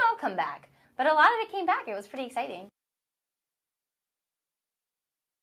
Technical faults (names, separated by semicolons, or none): none